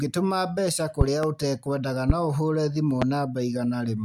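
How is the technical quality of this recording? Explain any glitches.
Loud pops interrupt the speech three times: a double pop from 1.01 to 1.26 s, then single pops at 2.10 to 2.13 s and 3.02 to 3.05 s, each far louder than the speech, which continues underneath. The likely cause is sudden voltage spikes, from a plug, switch, static or driver glitch, that the following circuitry shapes into sharp thumps.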